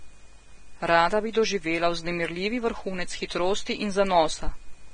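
Throughout, the speech sounds hissy and grainy, with nothing above 9.7 kHz. A spectrogram shows a flat ceiling and speckled treble, likely from heavy, low-bitrate Vorbis compression.

At 1.33 s, just before "doživela vznemirljivi vrhunec", pre-echo appears as a 16 ms hiss. Block quantisation noise leaks ahead of the attack, so the waveform shows fuzz before the onset.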